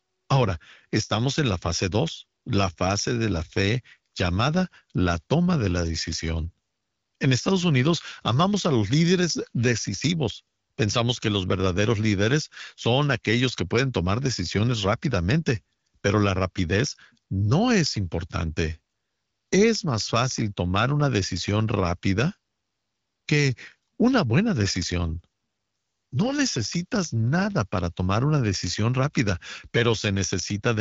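The clip is speech, and nothing is technically wrong with it.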